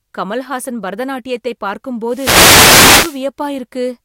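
From 2.09 to 3.23 s, just after "கமல்ஹாசன் பரதநாட்டியத்தை பார்க்கும்", a hiss of static swells over the speech for about 1.1 s. This is a wireless microphone noise hit: the FM radio link faded as reflected signals cancelled, letting receiver noise rise through the audio.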